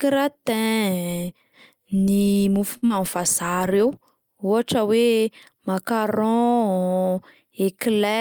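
A short stall from a late packet comes at 2.77 to 2.84 s. A packet arrived late, and with nothing queued in the jitter buffer the receiver stretched the last sound for about 50 ms until the packet turned up, then carried on from the same point. No speech is lost, but the sound in progress is held unnaturally long, with a faint buzz or slight dip. The whole stream runs about 50 ms later from here.

Short concealed packet loss follows almost immediately, at 2.86 to 2.92 s. About 60 ms of speech never reached the decoder in time and is gone. The receiver bridged the gap with roughly 34 ms of synthesised continuation, extending the last sound's pitch or shaping noise, then blended back into real audio. The catch-up also pulls the delay back by around 30 ms. It sounds like a brief smear or wobble right after the stall, and a short consonant can drop out.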